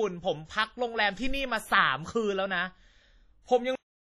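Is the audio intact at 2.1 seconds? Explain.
No. At 2.1 s, as through the whole clip, the speech has likely passed through WMA compression at a low bitrate, consistent with about 32 kbps. The coarse transform quantisation smears noise across long blocks and drops weak detail, leaving ringing, washy sound with breathing hiss and nothing above 13.9 kHz.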